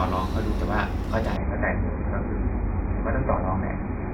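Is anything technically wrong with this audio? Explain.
Yes. From 1.37 s to the end, the speech drops to an adaptive stream at a lower bitrate. The connection slowed and playback switched abruptly, with no gap, to a far leaner encode. Nothing remains above 2.5 kHz, which points to a fall from about 96 to 12 kbit/s AAC.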